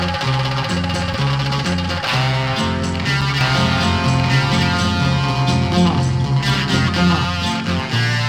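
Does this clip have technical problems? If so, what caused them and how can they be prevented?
Yes. There are three short blocks of digital silence, at 1.14, 3.21 and 6.55 s. Each drops straight to zero and back, so you hear a tick: 2.67 ms at 1.14 and 6.55 s, 5.33 ms at 3.21 s. That fits 128- and 256-sample buffers the program didn't fill in time. Bigger buffers or a less loaded audio thread should stop it.

From 3.41 to 7.25 s there's a doubled audio track. A full-band copy, about as loud as the original, runs roughly a second and a half behind, with no room colour, and starts and stops abruptly. It's likely a second capture path or an edit left holding an out-of-step copy. Check routing and monitoring so each source is recorded only once.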